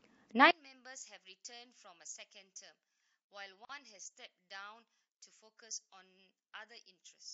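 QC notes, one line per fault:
0.51–7.33 s, one channel inverted: From 0.51 s onward, the mono sum of the speech drops by about 24 dB, with the centred voice and low end largely cancelled. What remains is faint, essentially the small difference between the channels. The likely cause is reversed polarity on one stereo channel, so content common to left and right subtracts rather than adds when the two are combined.
3.65–3.69 s, gap at a join of encoded pieces: A silence of about 44 ms cuts into continuous speech, with its edges softened by codec smearing. Afterward the speech resumes exactly where it stopped, with nothing lost. This matches separately encoded segments butted together untrimmed. The encoder's start-up delay and the padding on the preceding segment's final frame both remain in the stream, leaving a short dead interval at the join.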